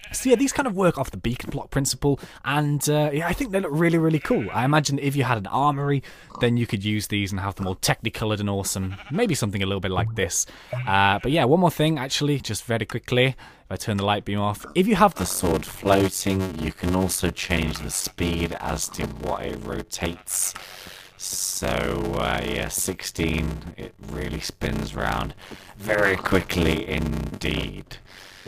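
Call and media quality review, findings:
Block size mismatch (padded), 15.17 s to end: buzz at 93.8 Hz, audio slowed to 0.625x, timbre kept. Zero-filled gaps in each block, fitting a 512-sample read buffer; the block-rate buzz rules out plain resampling.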